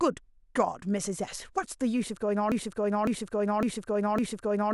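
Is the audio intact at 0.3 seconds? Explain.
Yes, at 0.3 seconds the audio is intact, with no dropout, distortion, glitch or other fault heard at that moment.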